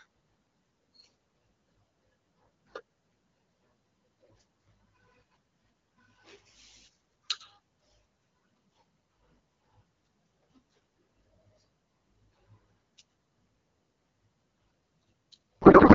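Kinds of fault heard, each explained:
Codec payload misread: In the last third of a second, from 15.61 s to the end of the clip, the speech gives way to garbled, warbling noise that barely tracks it, replacing the clear, lightly coded wideband sound heard before. The decoder is still receiving well-formed AMR frames but reading their fields from the wrong bit positions, which points to octet-aligned packing being unpacked as bandwidth-efficient, so the rebuilt speech parameters are nonsense.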